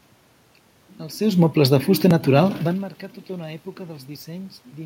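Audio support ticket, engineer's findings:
No system fault found in the speech; the room background and the level shifts near 1 s and again around two and a half seconds come from the room and the talker moving relative to the mic.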